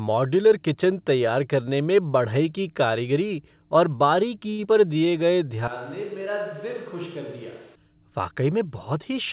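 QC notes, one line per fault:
4.50–4.61 s, short stall from a late packet: the jitter buffer ran dry and the last sound was held for 85 ms until the packet arrived, then playback resumed where it left off with nothing lost. On a spectrogram, frozen, repeated harmonics form flat horizontal bands. The waveform shows a looped, slightly dipping stretch.
4.65–4.67 s, short concealed packet loss: about 40 ms of audio never arrived in time, and a brief synthetic extension bridged the gap, so a short sound is smeared or missing. The buffer shed roughly 40 ms of delay. A spectrogram shows a thin seam where the harmonics break and rejoin.
4.87–5.11 s, jitter buffer slow-down: the receiver rebuilt its reserve by repeating single pitch periods, adding 42 ms and running the audio at 85% speed at unchanged pitch. Sounds are drawn out. On a spectrogram the harmonic spacing stays put while the features stretch horizontally. 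The waveform shows repeated identical cycles.
5.68–7.75 s, switch to a distant microphone: the sound abruptly turns roomy and hollow with thinner bass, about 10 dB quieter, and room noise sits around 25 dB below the speech. The likely cause is a fall-back to a farther microphone. A spectrogram shows smeared reverberant tails, weaker low frequencies and a raised noise floor, with sharp edges at both switch points.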